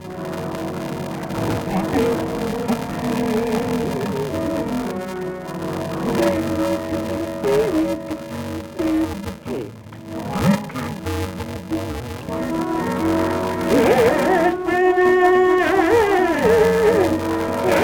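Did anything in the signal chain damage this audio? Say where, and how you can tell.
Yes: interleaved audio read as planar throughout, a sample-format conversion fault; dull, robotic sound buzzes near 375 Hz, fitting 128-sample blocks, showing as spectrogram striping every 2.67 ms.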